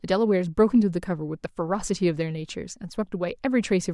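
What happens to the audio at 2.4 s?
Nothing goes wrong at 2.4 s: the speech carries on intact through that moment with no audible fault.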